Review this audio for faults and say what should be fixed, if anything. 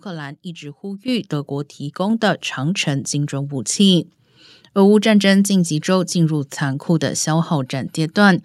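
The microphone volume was stepped up twice by the call software's automatic input control, which judged the microphone too quiet and raised the device's input level in single jumps rather than gradually. At 1.08 s the level rises by about 9 dB, and at 2.1 s by a further 3 dB or so. Because the change happens at the device, speech and background noise get louder together, in sudden steps. To prevent this, turn off automatic microphone level adjustment and set a fixed, suitable input volume before the call.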